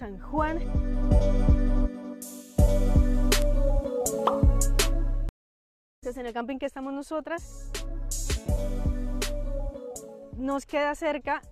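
The audio has two faults. At 3.42 s a bit error spike produces one sharp, broadband tick unrelated to the surrounding sound. Its brevity fits a flipped bit in one or two adjacent samples, where the value jumps by a power of two and snaps straight back. From 5.29 to 6.04 s a stream reconnect cuts the audio to about 0.73 s of silence. When sound returns, it resumes at a point roughly 0.7 s further on, consistent with a live connection dropping and a fresh decoder restarting mid-stream.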